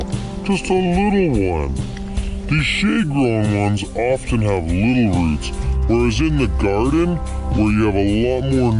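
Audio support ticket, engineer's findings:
Wrong sample rate, whole clip. Playback clock running slower than the source rate with no resampling; the ratio points to 48 kHz material clocked out at 32 kHz. Result: everything runs at 0.667x speed and drops about 7 semitones (−7.02), pitch and tempo falling together, so the sound comes out low, slow and dragging. Probable component: output device or stream config reporting the wrong rate. Fix: match declared rate or insert a resampler.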